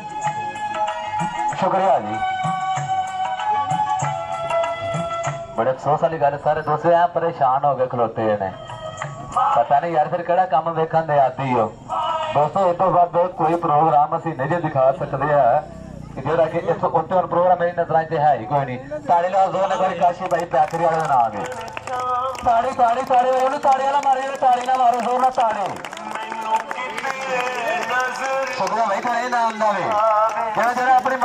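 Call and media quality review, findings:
No audible faults found; nothing to escalate.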